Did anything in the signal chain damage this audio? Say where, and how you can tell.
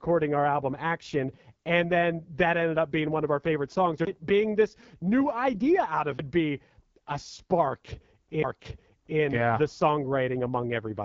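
Yes. At the codec stage, AMR wideband (HD Voice) coding at 8.85 kbit/s leaves the speech rough and raspy throughout, with nothing above 7.1 kHz. Narrowband coding would cut off far lower.

At playback, a CD skip at 6.18 s, just after "new idea out of", gives a tick and a brief mute of around 10 ms. The sound then resumes from another point on the disc, not where it left off as after a dropout.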